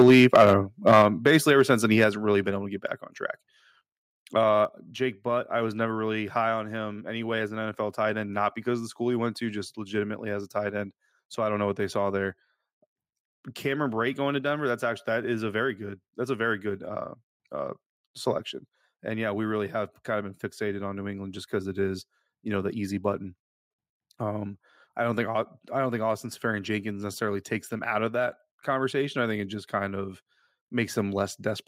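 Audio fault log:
0.00–0.54 s, 0.87–1.73 s and 2.00–2.04 s, microphone overload: the input was likely set too high, driving the converter past its limit by about 8 dB, about 7 dB and about 2 dB respectively. The waveform tops are flattened, around 7, 2 and 1.5 percent of samples in each stretch, which adds a clipped, crackling edge to the loudest moments, the second ending just before "then he" and the third falling between "then he" and "really been able to".
0.02 s, 1.02 s, 2.04 s and 4.65 s, microphone volume stepped down: the call software likely reacted to the overloaded input by cutting the device's input volume in single steps of about 2 dB, 5 dB, 3 dB and 4 dB. The sound and its background drop abruptly in level at each point, with the first three landing inside or right at the end of overloaded stretches, the third just before "really been able to".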